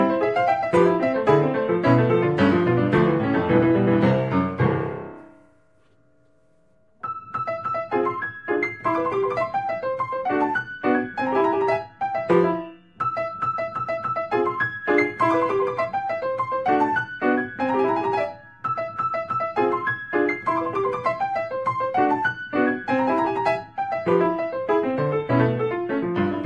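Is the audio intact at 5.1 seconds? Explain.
Yes, the sound at 5.1 seconds is intact, with no audible fault at that moment.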